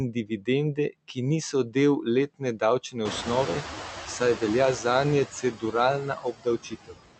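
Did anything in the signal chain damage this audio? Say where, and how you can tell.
Yes. Noise suppressor artifacts run throughout, from call processing. The suppressor cuts noise by about 20 dB frame by frame.

Speech cut by the noise suppressor appears at 0.13–0.48 s, 5.42–5.74 s and 6.02–6.99 s. The suppressor mistook quiet speech for noise. Drops reach about 13, 14 and 20 dB, so those parts sound swallowed.

The noise suppressor catching up is audible from 3.05 to 5.25 s. The room noise jumps by about 21 dB near 3 s. It leaks through at first, cut only about 8 dB, then sinks as the estimate adapts over 2.2 s.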